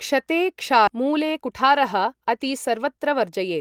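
Speech with a skip ahead at 0.87 s: roughly 0.4 s of audio vanishes and the sides join directly, a jump rather than the audible gap of a dropout. From 0.97 to 3.49 s, jitter buffer speed-up runs the speech at 108% with unchanged pitch, trimming about a fifth of a second of pitch periods, unlike resampling, which would raise pitch.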